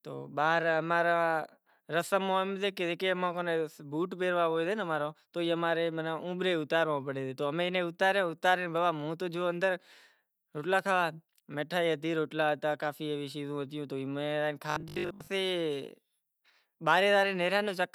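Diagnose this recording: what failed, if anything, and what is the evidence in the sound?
A buffer underrun at the driver or buffer stage likely caused robotic sound from repeated short buffers between 14.70 and 15.30 s: most of that stretch replays the last 20 ms chunk, imposing a rigid 50 Hz metallic buzz that loosely tracks the speech.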